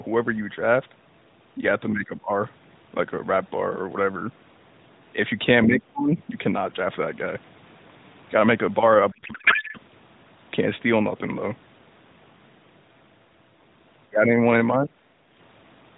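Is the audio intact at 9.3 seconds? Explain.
No. A codec payload misread runs from 9.12 to 9.78 s: octet-aligned AMR frames are decoded as bandwidth-efficient, misplacing fields, so the speech becomes garbled warbling noise.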